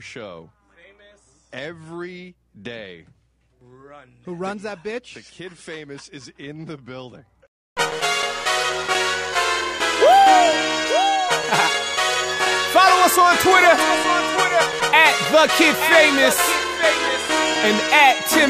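No technical faults can be heard anywhere in this recording.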